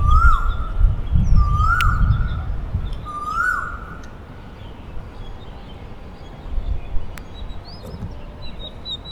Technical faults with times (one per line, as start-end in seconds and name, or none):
1.81 electrical switching spike
7.18 electrical switching spike